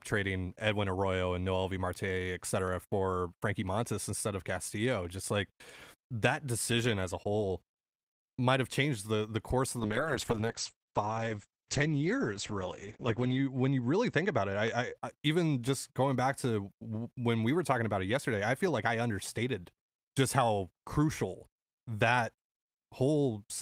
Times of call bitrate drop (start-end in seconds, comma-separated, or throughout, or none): 9.80-15.01